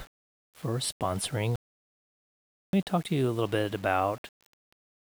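A speech recording with a grainy, gritty distortion that follows the voice throughout and sits roughly 30 dB below it, likely low bit depth without dither, consistent with rounding to about 7 bits. From 1.56 to 2.73 s, after "for sponsoring", the audio cuts to silence for 1.17 s, then resumes with "me talk to you", likely a playback stall where the player ran short of data.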